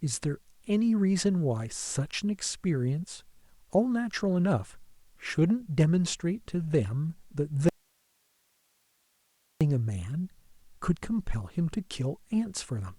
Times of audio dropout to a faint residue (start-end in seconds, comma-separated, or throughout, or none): 7.69-9.61